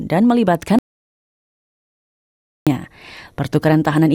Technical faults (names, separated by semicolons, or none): audio dropout to silence